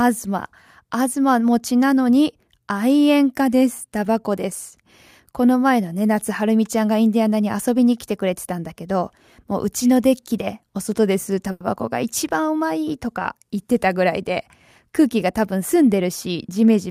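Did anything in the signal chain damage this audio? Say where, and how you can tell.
Yes: a short stall from a late packet at the network stage, 11.51 to 11.63 s. The speech holds for about 90 ms while the jitter buffer waits, then resumes with nothing lost.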